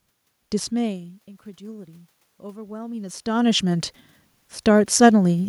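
Speech, with automatic gain rising from 0.36 to 3.92 s. The input fell by about 18 dB as the talker moved away. The gain climbed about 6 dB, swelling voice and room noise together.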